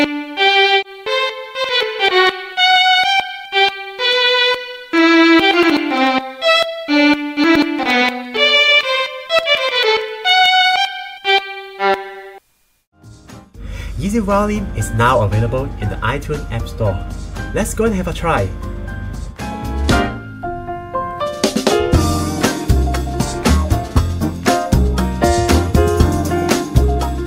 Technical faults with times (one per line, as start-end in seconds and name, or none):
none